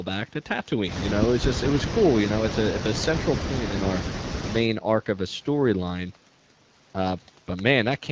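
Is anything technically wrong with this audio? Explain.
No, nothing here is technically wrong; it's just speech that has come through an ordinary HD Voice call, with the usual microphone processing and an AMR wideband link at 12.65 kbit/s.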